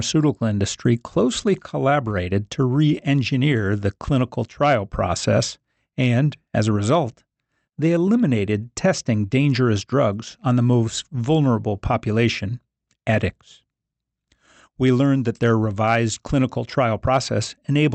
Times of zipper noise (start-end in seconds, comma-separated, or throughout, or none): none